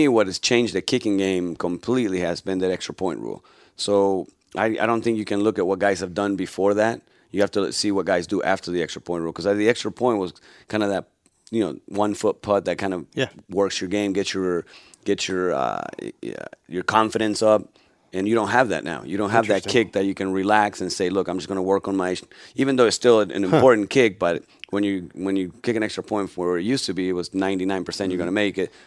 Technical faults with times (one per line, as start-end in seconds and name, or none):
none